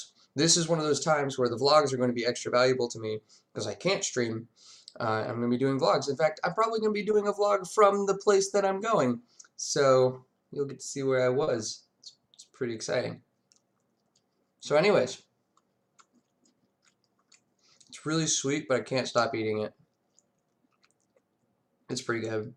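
At 7.11 s and again at 11.43 s there's short concealed packet loss: about 20 ms and then 40 ms of audio arrived too late, so the receiver extended the preceding sound to bridge each gap before blending back, which comes across as a brief smear or wobble.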